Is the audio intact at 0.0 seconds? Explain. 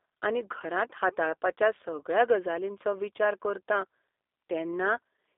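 No. A G.729 codec runs throughout, rebuilding the speech from a vocal tract model and sparse pulses, so it is confined to 300 Hz–3.6 kHz and sounds rough and synthetic.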